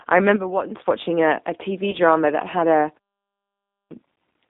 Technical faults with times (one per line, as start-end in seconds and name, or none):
0.00-4.50 G.729 codec
1.91-1.95 VoIP packet loss concealed by the speech codec
3.46-3.91 clipped start after a pause